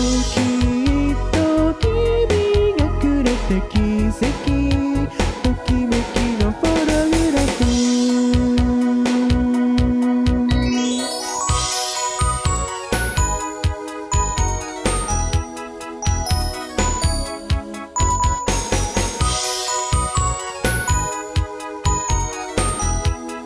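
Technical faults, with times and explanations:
No technical faults can be heard anywhere in the clip. There is nothing to list by time or by type.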